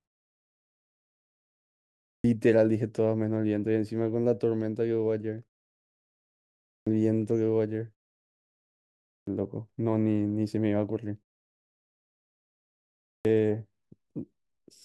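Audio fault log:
2.10, 6.71, 9.12 and 13.08 s: clipped start after a pause. After 1.2 to 2.1 s of silence, the sleeping output wakes late and swallows 140 to 170 ms of each onset. Unlike muted pauses, actual speech goes missing here, not just background.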